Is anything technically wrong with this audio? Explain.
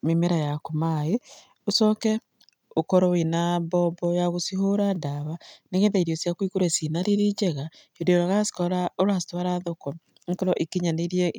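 No, nothing technically wrong can be heard in this speech recording. The audio stays steady throughout, with no audible faults.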